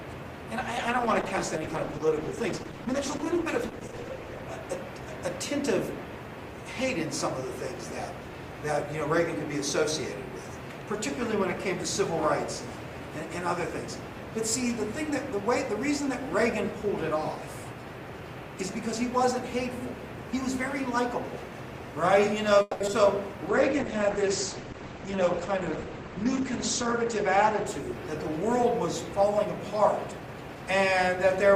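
From 0.7 to 4.49 s there's a call bitrate drop: the encoder gets squeezed from 48 down to 12 kbps and stays at the bottom for about 3.7 s, so the sound turns coarse and watery until it recovers.

At 22.61 s the sound hangs and smears on for about 190 ms until 22.82 s, a call audio freeze, likely from packets stalling so the jitter buffer ran dry. Nothing goes silent and nothing is lost, but everything after it lands that much later.

Right after that, at 22.86 to 22.89 s and again at 22.91 to 22.94 s, come two bits of short concealed packet loss. Each gets only about 10 ms of patched-in sound, while 40 ms and then 20 ms of the real audio simply drop out, so you hear quick little smears or wobbles. The first one also claws back some of the delay.

A second call bitrate drop runs from 23.5 to 29.52 s, from 48 down to 10 kbps for about 3.2 s at the bottom. The bandwidth also shrinks from 20 kHz to 8 kHz, so it goes rough and muffled.

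Finally, from 29.66 to 30.93 s there's a jitter buffer speed-up. The receiver trims out short pitch-period slices, roughly a tenth of a second in total, so the sound plays at about 109% speed at the same pitch and feels hurried.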